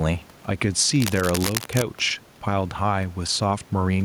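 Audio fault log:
Throughout: gain pumping. The level keeps pumping with the speech, with a swing of around 5 dB. That points to the gain likely being set too hot, with a fast limiter or compressor grabbing every peak and squashing loud and soft parts together.
1.0 to 1.82 s: cable scratch noise. For just under a second there's a dense, ragged scratching and rustling over the speech, only a few dB below it and far above the room noise, which sits about 31 dB down. That's likely a worn cable or connector being moved, with its contact resistance jumping around.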